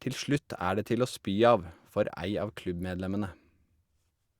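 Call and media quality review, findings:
No faults heard.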